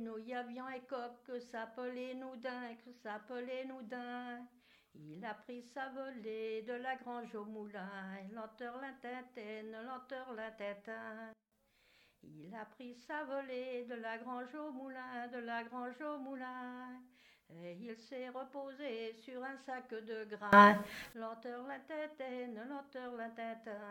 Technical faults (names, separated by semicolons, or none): sudden gain jump